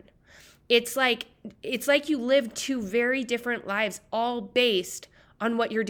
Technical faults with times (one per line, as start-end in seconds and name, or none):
none